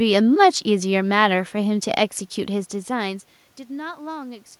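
No technical faults are audible.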